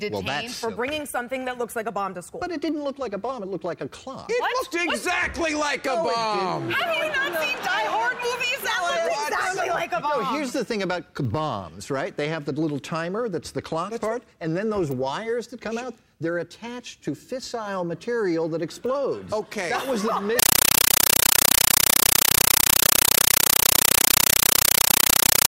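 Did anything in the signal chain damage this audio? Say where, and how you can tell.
Yes. At the playback stage, from 20.39 s to the end, the sound turns into very loud, chattering static. That is a compressed stream played as audio: undecoded AC-3 data, likely around 384 kbps, treated as samples. Each frame becomes an 8 ms noise burst and then silence, repeating at 31.25 Hz.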